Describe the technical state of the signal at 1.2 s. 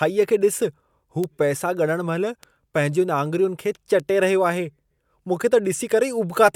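At 1.24 s there's a bit error spike, a single sharp tick cutting through the speech. It sounds like a single flipped bit in one sample, throwing the value off by a power of two before it snaps straight back, so the click is broadband and has nothing to do with the speech around it.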